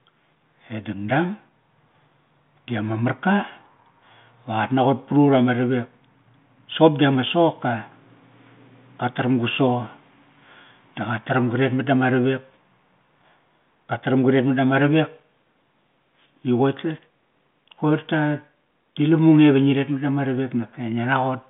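Nothing stood out on listening to this speech.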